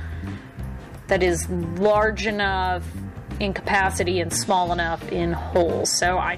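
No technical faults can be heard anywhere in this clip.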